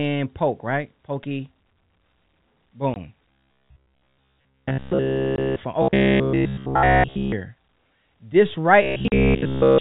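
At 2.94 to 2.96 s a packet loss filled with silence cuts a 20 ms hole, consistent with one dropped packet. The waveform drops flat to silence with abrupt edges, and the spectrogram shows a thin vertical gap.

From 3.31 to 5.56 s the sound becomes robotic from repeated short buffers, likely because audio arrived too slowly and the last 15 ms was looped. Essentially the whole stretch is repetition, which imposes a rigid 66.7 Hz metallic buzz. On a spectrogram this shows as evenly spaced horizontal harmonic lines, and the waveform shows a nearly identical cycle every 15 ms.

Inside that stretch, at 5.36 to 5.38 s, another 20 ms silent gap appears as a flat line with abrupt edges.

The same robotic buzz at 66.7 Hz returns from 5.82 to 7.32 s, and again from 8.82 s to the end.

Within that last stretch, at 9.08 to 9.12 s, a 40 ms silence gap points to two consecutive lost packets. It shows as a wider blank column.

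Throughout, the G.711 telephone coding leaves no energy above 4 kHz, so the top of the spectrogram is empty.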